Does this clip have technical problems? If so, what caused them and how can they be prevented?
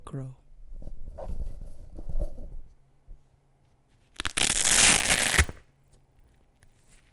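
Yes. From 4.96 s to the end, the sound carries a regular tick at 25 Hz, a buzz tied to 40 ms blocks. This is a resampler restarted on every block. Each block was converted from 24 kHz to 48 kHz in isolation, leaving small errors at every edge. Keep the resampler's state running across blocks.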